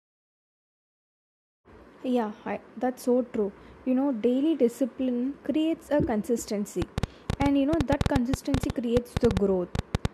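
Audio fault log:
6.82–10.06 s, train of clicks: likely interference from nearby equipment or a faulty connection injects repeated pulses, around thirty clicks at about 8 per second with uneven spacing. Their similar, sharp shape, standing well above the speech, is heard as popping ticks, in pauses too.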